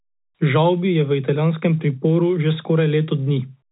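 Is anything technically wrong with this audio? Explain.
No, nothing technically wrong can be heard here.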